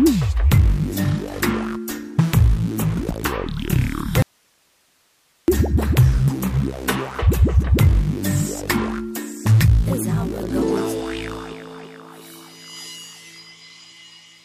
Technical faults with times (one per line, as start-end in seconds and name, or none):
4.22-5.48 audio dropout to a faint residue